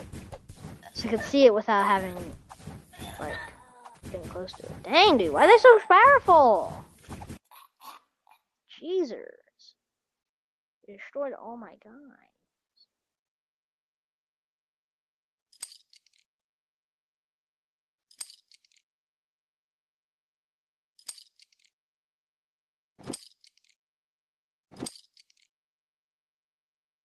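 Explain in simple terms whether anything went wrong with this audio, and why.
Nothing went wrong with this audio. It was carried over an ordinary internet call connection, which leaves its normal coding texture and trims the very highest frequencies above about 12 kHz, as call audio usually does.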